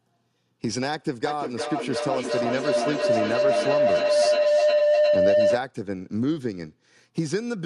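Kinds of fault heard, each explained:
Feedback howl: From 1.25 s to 5.66 s, a tone near 700 Hz swells until it stands about 6 dB above the speech, pulsing roughly every 400 ms. A microphone is picking up a loudspeaker that carries its own signal, and each trip around that loop returns louder, so the sound narrows onto the one pitch the loop favours. Unlike ordinary echo, whose repeats fade, these grow until the loop breaks.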